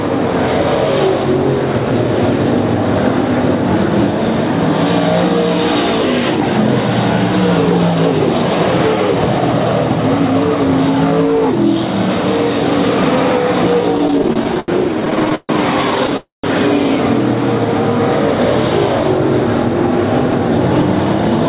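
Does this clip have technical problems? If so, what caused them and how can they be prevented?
Yes. Repeated stalls (stutter) run from 13.98 to 15.51 s: packets arrived late again and again, so the jitter buffer kept running dry and the receiver stretched the last sound through 19 short gaps, the longest 141 ms. About 408 ms, roughly a quarter of that stretch, is filler, so nothing is lost but the audio drags. A larger or more adaptive jitter buffer and a steadier network path with less congestion would prevent this.

A call audio freeze follows at 16.17 to 16.46 s, where the sound hangs as a fading continuation for 268 ms, ending in about 150 ms of silence before resuming where it stopped. The likely cause is packets held up in transit, emptying the buffer and adding that much delay. Prioritising call traffic with QoS and avoiding congested or wireless links would prevent this.

The call path itself carries nothing above 4 kHz, as expected for G.711 A-law.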